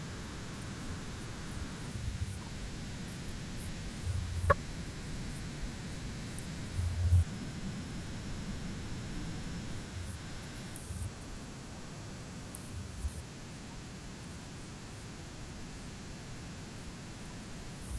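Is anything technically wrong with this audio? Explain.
No, nothing technically wrong can be heard in this speech recording. There is no moment in it that calls for a closer look.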